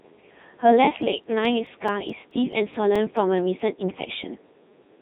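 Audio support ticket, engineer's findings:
Codec 2 vocoder, full length: robotic, buzzy speech, waveform not preserved, resynthesised from sine waves using pitch, voicing, energy and envelope. Heavy damage, consistent with the 3.2 kbit/s mode. Spectrogram: harmonic combs, smeared envelopes, nothing above 3.9 kHz. Waveform: phase structure doesn't match natural speech.

CD scratch ticks, 0.81 to 3.60 s: 14 regular ticks, about five per second, of uneven strength. Probable cause is a disc blemish once per revolution, exceeding error correction, with samples interpolated or muted. Waveform: brief discontinuities, the longest a few milliseconds. Spectrogram: evenly spaced thin vertical lines.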